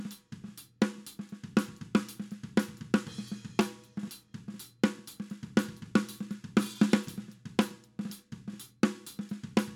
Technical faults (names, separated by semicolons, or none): none